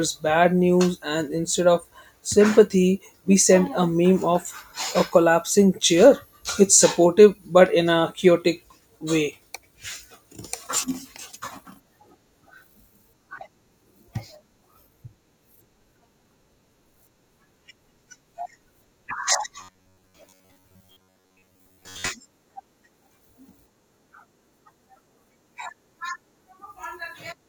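From 19.59 to 22.10 s the speech turns into robotic sound from repeated short buffers: a rigid metallic buzz at 93.8 Hz that loosely follows the words, likely from a 10.7 ms segment replayed over most of the audio. A spectrogram shows flat harmonic stripes, and the waveform shows one identical cycle repeating.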